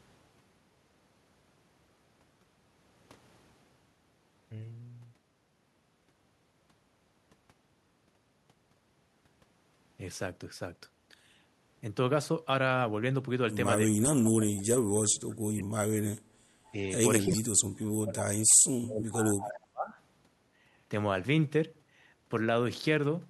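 From 13.85 to 14.03 s the speech sinks by roughly 40 dB and returns, then from 14.38 to 16.02 s it dips by up to roughly 40 dB. This is speech suppressed in double talk, likely an echo canceller turning down the talker along with the far side while both spoke at once. Between those two dips, from 14.25 to 14.3 s, a faint scrap of voice arrives 340 ms late at roughly 20 dB below the speech. This is an echo leak, likely loudspeaker pickup that the far end's canceller did not fully remove and sent back. From 16.3 to 16.44 s the room sound briefly falls away by about 16 dB before returning. This is background gated by the echo canceller, which clamped the microphone while the loudspeaker was playing. The double-talk suppression then returns: a slight dip of roughly 5 dB from 16.72 to 16.78 s, a deeper cut of roughly 25 dB from 17.26 to 17.59 s, and a sustained stretch from 18.02 to 19.95 s where the speech is pulled down by as much as roughly 40 dB.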